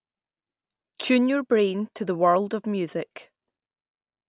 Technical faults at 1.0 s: none

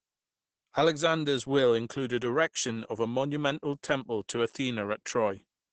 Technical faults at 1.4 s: Opus voice compression

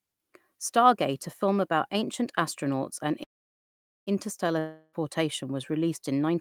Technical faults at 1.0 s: none

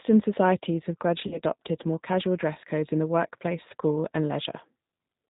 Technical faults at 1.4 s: G.729 codec; VoIP packet loss concealed by the speech codec

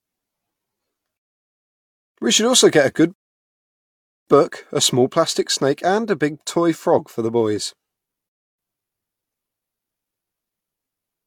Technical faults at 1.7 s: rebuffering stall

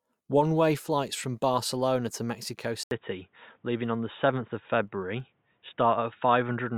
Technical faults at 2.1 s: filter restarted on every block

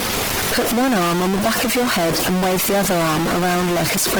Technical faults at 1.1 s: stuck bit; Opus compression

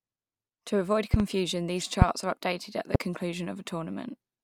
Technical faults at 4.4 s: none

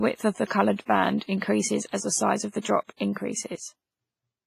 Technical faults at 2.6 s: WMA compression; pre-echo

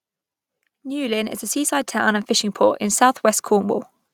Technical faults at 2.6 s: automatic gain rising

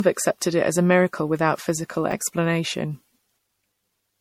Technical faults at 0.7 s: generation loss

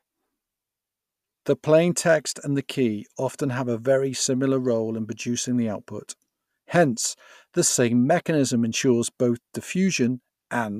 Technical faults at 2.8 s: none

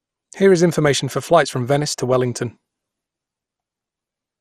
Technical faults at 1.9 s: MP2 compression

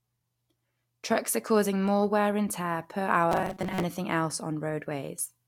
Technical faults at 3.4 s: robotic sound from repeated short buffers

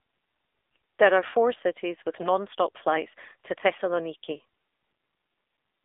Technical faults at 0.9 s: AMR narrowband mobile codec

